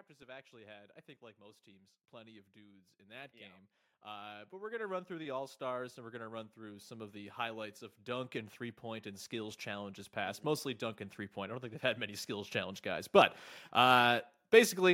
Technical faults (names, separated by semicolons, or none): automatic gain rising